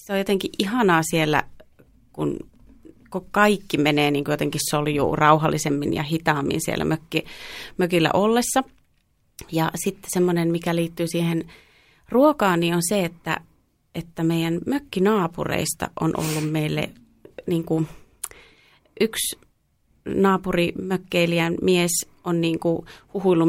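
From 0.51 s, just after "on jotenkin", to 23.08 s, the speech carries clock slip clicks. Faint ticks repeat about every half second, around fifty in all. Each is one sample dropped or repeated. The likely cause is two unsynchronised clocks differing by roughly 50 ppm.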